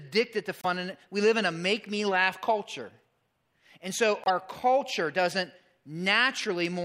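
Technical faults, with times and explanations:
0.61–0.65 s and 4.24–4.30 s, corrupt frame decoded: damaged compressed frames, apparently one then two, were played anyway, putting misplaced energy into brief glitches peaking around −20 and −15 dBFS just before "and we live in" and "culture doesn't". Spectrograms show short off-pattern smears; waveforms show spiky bursts.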